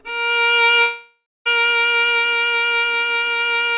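From 0.82 to 1.47 s the sound smears into a fading buzz, goes silent, then resumes with a chunk gone: likely a long network dropout.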